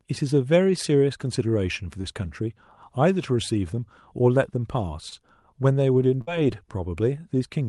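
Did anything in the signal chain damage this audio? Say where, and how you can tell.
Yes, at the network stage of this speech call. Short concealed packet loss occurs at 2.01–2.05 s and 5.09–5.13 s. Each shows as a brief smear or wobble where about 20 ms of audio never arrived. The decoder extended the preceding sound, pitched or noise-like, then blended back.

A burst of packet loss occurs at 6.21–6.29 s, where 60 ms went missing consecutively. The receiver stretched the last sound across the gap while fading it down, producing a short held buzz or hiss. Speech then resumes with that stretch absent, beyond the normal Opus coding character.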